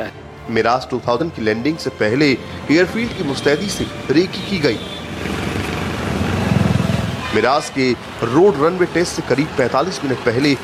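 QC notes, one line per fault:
1.16–1.22 s, damaged data in a compressed stream: a 54 ms glitch where corrupted bytes make the decoder misread frames and lose sync until it finds the next header. The spectrogram shows a brief broadband smear, and the waveform an abrupt discontinuity.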